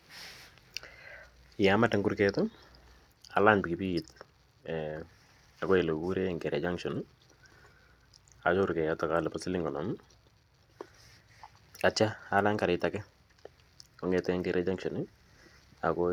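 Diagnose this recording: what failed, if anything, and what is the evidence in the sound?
Nothing failed; no faults heard.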